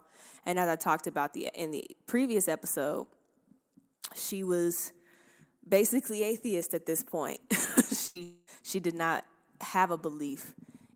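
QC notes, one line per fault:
8.07–8.17 s, burst of packet loss: about 80 ms of audio is gone. The receiver continued the last sound and turned it down, then resumes further on. On a spectrogram the last spectrum smears flat across the gap, and the waveform envelope decays before the jump.
8.23–8.49 s, long network dropout: about 240 ms is replaced by the final sound held on and steadily fading, with no true silence, before the audio returns at "she did not have". The cause is likely a stalled network stream. Spectrogram shows frozen, dimming bands; the waveform tapers smoothly.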